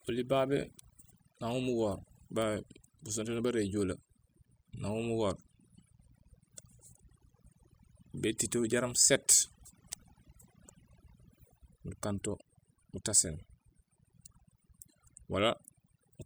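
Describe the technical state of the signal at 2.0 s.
At 2.0 s the speech carries a steady, raspy mains buzz, present through the whole clip, sitting roughly 25 dB below the voice. Sharp switching spikes, twice per 60 Hz cycle, leak in from a dimmer, rectifier or unshielded cable, spraying harmonics up into the kilohertz range.

The background around the voice is also lowered and broken up into twinkling specks, throughout the clip. This is overdone noise removal: frequency bands judged close to the noise estimate are cut deeply or entirely, taking quieter parts of the speech with them.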